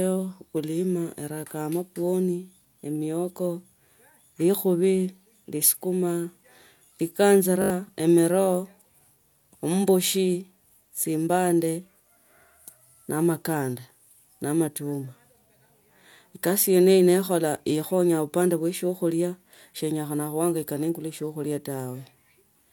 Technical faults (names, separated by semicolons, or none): repeated buffer